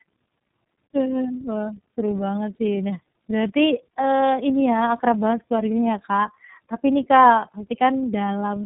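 Throughout, tandem speech coding makes the speech rough, muffled and warbly, which fits a G.729A stage followed by iLBC, the second coder re-encoding the first one's errors. A spectrogram shows nothing above 3.7 kHz, with smeared, blotchy harmonic bands.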